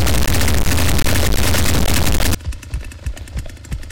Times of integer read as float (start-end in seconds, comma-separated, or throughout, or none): 0.00-2.34